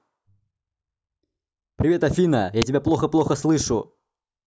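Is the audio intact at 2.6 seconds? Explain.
No, an uninitialised buffer hits at 2.62 s: a 5 ms block played before audio was written, so leftover memory became a loud crack.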